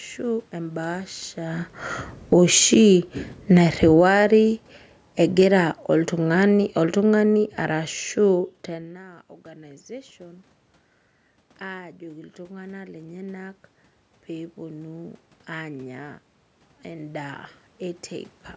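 From 2.17 to 8.55 s the automatic gain falls: the control judged the input too loud after the talker moved around 1.5 s and eased its gain down by about 15 dB over roughly six seconds. The speech sinks slowly, and the room noise sinks with it. That shared decline separates it from a talker moving, which changes only the voice and leaves the background level where it was.

The automatic gain then rises in two stretches, 8.73 to 10.53 s by about 3 dB and 11.72 to 18.1 s by about 6 dB. These follow a drop in input of about 20 dB near 8.5 s, when the talker moved away. The voice swells gradually, with the background lifting alongside it. A talker returning to the microphone would raise the voice alone, and would do so more abruptly than this slow, gain-driven climb.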